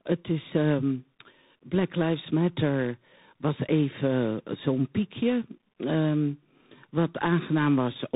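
Across the whole clip the speech shows tandem speech coding: it was decoded and re-encoded at each network border, and each coder worked on the previous one's already damaged output. The texture points to an ADPCM stage followed by a CVSD-style delta-modulation stage, with nothing above 3.8 kHz. The result is a layered roughness over a muffled band. A single narrowband codec would leave the audio dull but not this stacked grit.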